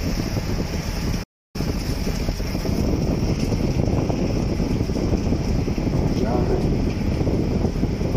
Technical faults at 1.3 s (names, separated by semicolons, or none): playback stall